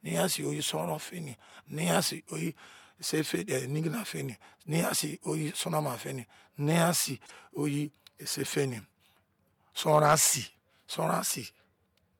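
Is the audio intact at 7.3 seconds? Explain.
No. From 7.25 to 7.31 s the speech skips ahead and a brief chirp, burst of noise or short hole replaces it, roughly the length of two 26 ms frames. The likely cause is a broken MP3 bit reservoir: frames went missing, so the next frame reached back for borrowed data and decoded bytes belonging to another frame. On a spectrogram this shows as a narrow vertical band that breaks the harmonic pattern, and the waveform shows an abrupt discontinuity at 7.25 s.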